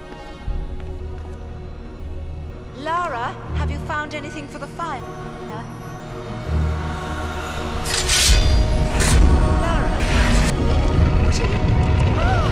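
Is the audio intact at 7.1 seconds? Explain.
Yes, the audio is intact at 7.1 seconds, with no dropout, click, distortion or other fault at that moment.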